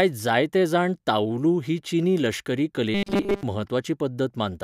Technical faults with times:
2.94-3.43 robotic sound from repeated short buffers

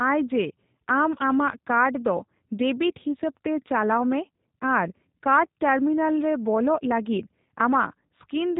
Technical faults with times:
0.00-8.60 G.729 codec

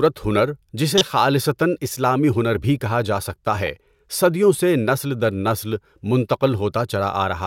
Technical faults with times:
0.97-1.01 corrupt frame decoded
3.66 corrupt frame decoded

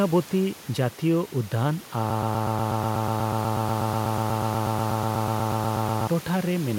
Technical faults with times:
2.10-6.07 broken-record loop

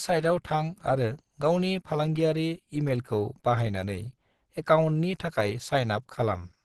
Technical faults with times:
0.00-6.64 Opus compression

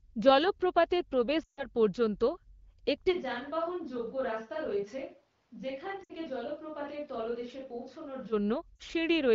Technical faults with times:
1.43-1.64 lost AMR speech frames
3.14-8.31 switch to a distant microphone
6.03-6.12 lost AMR speech frames
8.76-8.82 lost AMR speech frames

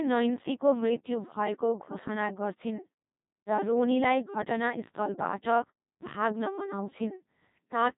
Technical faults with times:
0.00-7.97 Codec 2 vocoder

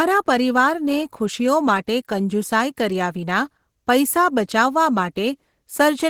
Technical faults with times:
0.00-6.10 Opus compression

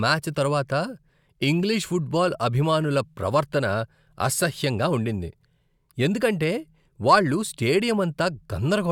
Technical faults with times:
none

